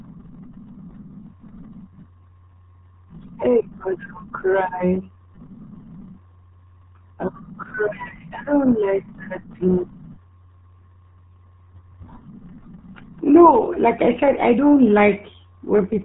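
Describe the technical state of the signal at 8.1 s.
At 8.1 s, as throughout, the speech has passed through the RealAudio 14.4 codec, heavily squeezed in a way that fits roughly 8 kbit/s. Nothing above 3.9 kHz survives, leaving it muffled and gargly.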